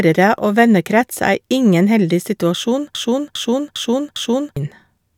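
Speech, with a broken-record loop from 2.95 to 4.57 s, right after "er ingen heldig situasjon": a 0.40 s fragment plays four times back to back, likely from a stalled player or stream. The spectrogram shows identical blocks tiling at 0.40 s intervals, and the underlying speech is lost.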